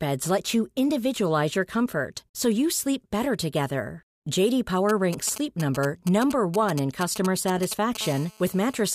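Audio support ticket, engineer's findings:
GSM signalling bursts, 4.89 to 7.97 s: galloping dit-dit-dit groups of short raspy buzzes, loud, sitting only modestly below the speech. Probable component: a 2G handset near the mic or preamp, exchanging control traffic with the network rather than carrying a call. Mechanism: its radio bursts, repeating at 216.7 Hz within each group, are rectified in the audio circuit. Differs from a call buzz: the bursts arrive in clusters with gaps between them, not as a continuous tone.

GSM phone buzz, 8.01 to 8.82 s: a hard, steady 217 Hz buzz, rich in harmonics, unrelated to the speech and about 18 dB below it. Probable component: the same nearby 2G handset, now in a call, transmitting in bursts 217 times a second. Mechanism: an unbroken 216.7 Hz train of radio pulses is rectified into audio. Differs from the signalling bursts by being continuous with no galloping rhythm, and from mains hum by its 217 Hz base frequency and raspy, buzzy timbre.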